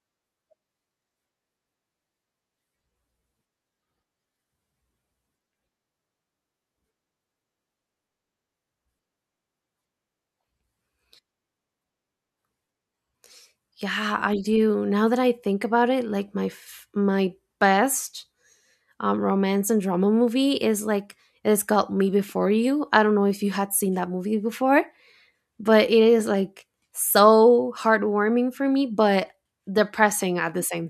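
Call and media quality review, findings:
No call or media quality findings to report for this speech clip.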